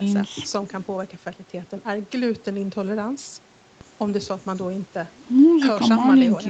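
Speech recorded through a call path, with nothing technically wrong with it.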